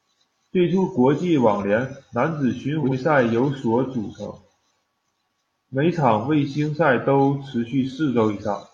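Speech, with frames out of order between 2.83 and 2.93 s, after "男子巡" and before "赛由所组". Two adjacent blocks of about 42.7 ms each were decoded in swapped order, giving a brief garbled flutter. No time is lost.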